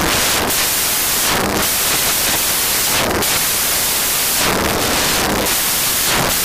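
From the first moment to the end, the audio is replaced by loud, harsh broadband noise, the sign of samples built from the wrong bytes. Each value is assembled in the wrong byte order or alignment, so the rapidly changing low bits dominate. The waveform looks like a solid dense block, and the spectrogram shows flat broadband energy.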